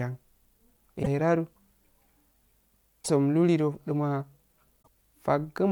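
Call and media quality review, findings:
Damaged data in a compressed stream: short glitches at 1.00–1.07 s, 3.01–3.10 s and 4.81–4.88 s in the speech. Probable component: decoder input. Corrupted bytes cause misread frames and lost sync until the next frame header is found.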